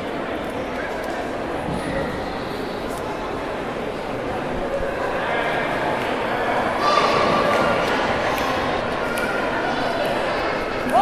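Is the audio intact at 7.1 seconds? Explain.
No, 6.97 to 7.13 s has frames out of order: two neighbouring 78 ms blocks swap places, giving a garbled flutter.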